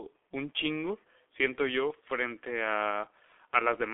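Throughout, the speech shows heavy G.723.1 codec damage: confined to 300 Hz to 3.5 kHz, but hoarse with smeared consonants, unlike clean band-limiting, which fits a 6.3 kbit/s rate.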